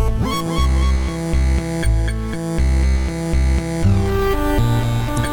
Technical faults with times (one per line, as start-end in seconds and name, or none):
5.14-5.19 damaged data in a compressed stream